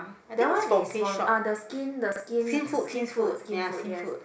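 At 2.12 s, running to 2.2 s, the speech has chunks out of order: a 40 ms piece of audio arrives one chunk late and plays after the piece that should follow it. The two 40 ms blocks are simply swapped, so the moment sounds briefly jumbled, with three hard joins. Unlike a dropout or skip, nothing is missing, and the total timing stays intact. Only the order within those 80 ms is scrambled.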